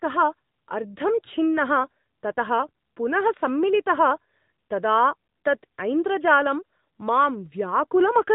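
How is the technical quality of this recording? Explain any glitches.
The quality is limited by mobile-phone coding across the whole recording. From start to finish the speech carries AMR narrowband mobile codec damage: nothing above about 3.8 kHz survives, so it sounds muffled and boxy. The codec rebuilds each voice from a vocal-tract model driven by sparse pulses, which gives a plainly buzzy, synthetic edge, consistent with a mid-rate mode around 10 kbps.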